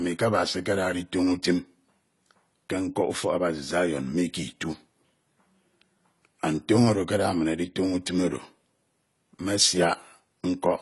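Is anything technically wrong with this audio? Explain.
Yes. AAC compression runs throughout: nothing sounds above 11.4 kHz, and the speech is dull and smeared, likely from AAC-LC quantising at a low bitrate near 32 kbps.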